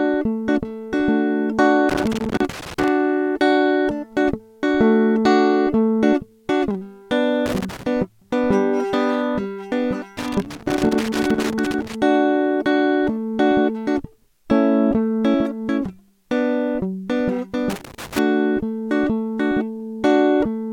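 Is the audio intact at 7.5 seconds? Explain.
No, loose connector crackle runs from 7.46 to 7.83 s, about 0.37 s across the moment asked about. A worn or dirty contact somewhere in the signal path is briefly shifting, so the connection opens and closes many times in quick succession. Each break chops the music, and any DC sitting on the line jumps at every make and break, adding pops. The result is an uneven burst of scratchy crackle over the music.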